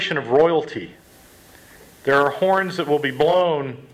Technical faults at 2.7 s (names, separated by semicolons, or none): digital radio blending to analogue